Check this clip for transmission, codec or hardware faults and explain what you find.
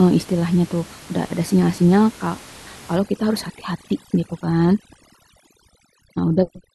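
One fault is audible: overdone noise removal from 2.96 s to the end of the clip. Before that point, room noise sits about 23 dB below the speech. From 2.96 s, a noise reduction stage is acting far too aggressively. It pulls individual frequency bands down hard whenever their level comes close to its noise estimate, and the quieter components of the speech fall below that threshold too. The background drops and breaks up into twinkling, musical specks.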